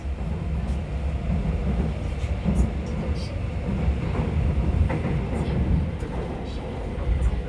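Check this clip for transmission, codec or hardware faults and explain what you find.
Checking this clip turned up no faults to explain.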